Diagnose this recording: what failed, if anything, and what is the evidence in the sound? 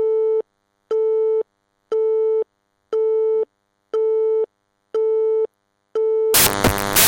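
The failure is in sample-format conversion, right at the tail. From 6.34 s to the end at 7.08 s the sound is replaced by loud, harsh broadband noise. That's samples built from the wrong bytes: the reader assembles each sample with its bytes misaligned or swapped, so the jittery low-order bits land in the high-order position and swamp the real signal with loud noise.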